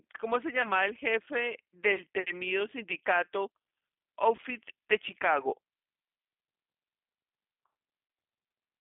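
Speech sent through a G.729 codec, with four short dropouts covered by the decoder's packet-loss concealment. Throughout, the sound is narrowband and slightly rough and synthetic, because the codec rebuilds each 10 ms frame from a vocal tract filter, a pitch predictor and a handful of pulses rather than sending the waveform itself. The roughness fits an 8 kbit/s stream. On a spectrogram the energy stops at a hard ceiling near 3.5 kHz, with little below about 200 Hz, and fine harmonic detail looks grainy. The VoIP packet loss concealed by the speech codec falls at 0.62 to 0.72 s, 2.23 to 2.26 s, 4.36 to 4.40 s and 8.08 to 8.10 s. Each event fits a single lost 20 ms packet. The decoder repeats its last pitch and filter at falling gain, so the sound briefly smears into a buzzy tone or coloured noise that fades. At 0.62 s the effect lingers for about 100 ms because each frame builds on the previous one. 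On a spectrogram these spots show as stretched, overly regular harmonics. On a waveform they appear as a repetitive stretch whose envelope decays before normal speech resumes.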